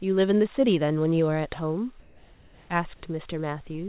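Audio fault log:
2.0–2.7 s, comfort noise in place of the background: the room tone turns flat and featureless with a level step of about 7 dB, likely synthetic fill during a discontinuous-transmission pause.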